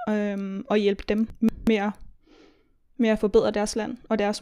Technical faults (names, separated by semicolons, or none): chunks out of order